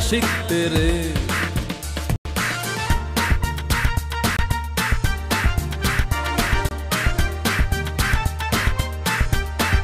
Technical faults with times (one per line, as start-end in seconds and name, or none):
2.16-2.25 block of digital silence
4.37-4.39 block of digital silence
6.69-6.71 block of digital silence